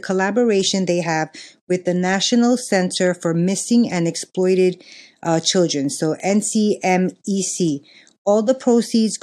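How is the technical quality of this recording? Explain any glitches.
The technical quality of this recording holds up, with no glitches to explain.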